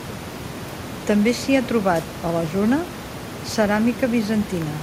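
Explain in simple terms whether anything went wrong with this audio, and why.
Nothing went wrong with this audio; the background noise, well below the speech, is just the room the microphone was in, not a problem with the recording.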